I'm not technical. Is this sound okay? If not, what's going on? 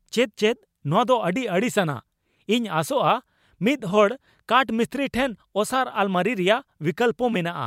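Yes, it's fine; nothing in this recording sounds broken or out of place, so there's nothing to worry about.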